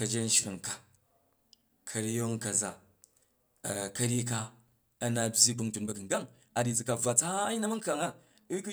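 From 5.45 s to the end, a time-stretched section: the speech abruptly runs 1.66 times faster yet keeps its pitch, sounding rushed. A simple speed-up would raise the pitch instead. This likely comes from software dropping short pieces to shorten the audio.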